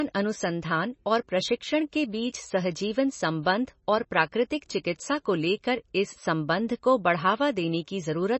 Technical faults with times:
0.00-8.40 MP3 compression

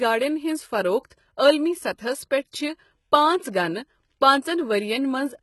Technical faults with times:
0.00-5.42 HE-AAC compression

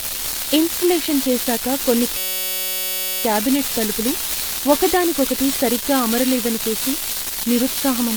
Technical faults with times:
0.00-8.16 unreliable data bit
0.00-8.16 generation loss
2.17-3.24 system hang loop

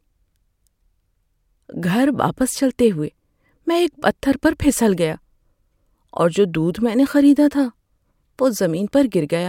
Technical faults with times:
none

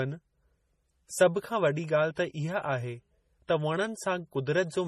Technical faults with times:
0.00-4.88 transcoding between lossy codecs

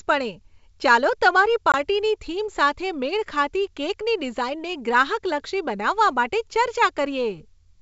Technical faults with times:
1.72-1.75 packet loss on an ADPCM call

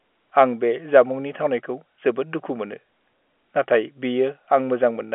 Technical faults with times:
none

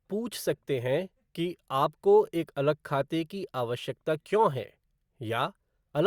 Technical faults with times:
none

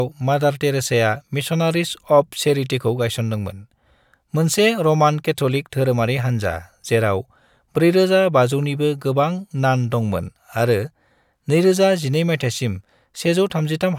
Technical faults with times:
none

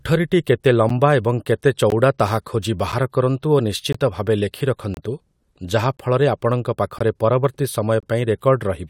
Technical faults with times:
0.89 gap between stream segments
1.90 gap between stream segments
2.92 gap between stream segments
3.93-3.95 gap between stream segments
4.94-4.97 gap between stream segments
5.97 gap between stream segments
6.99 gap between stream segments
8.00-8.03 gap between stream segments

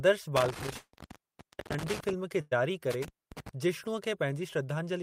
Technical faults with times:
0.36-2.13 intermittent contact
0.77-0.95 long network dropout
2.41-2.53 burst of packet loss
2.91-3.49 intermittent contact

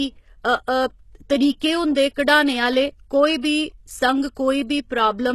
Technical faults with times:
0.00-5.34 HE-AAC compression
1.60 pre-echo
3.41-3.44 pre-echo

